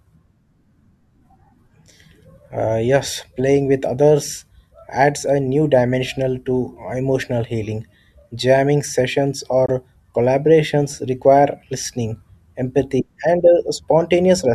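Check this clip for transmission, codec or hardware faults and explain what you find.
One fault stands out, a Bluetooth dropout at 9.66 to 9.70 s, just before "collaborations require listening empathy". A packet likely failed to reach the headphones in time and was discarded, leaving a brief hole of about 21 ms, consistent with a single lost frame. The speech stops, then resumes as though it had kept playing.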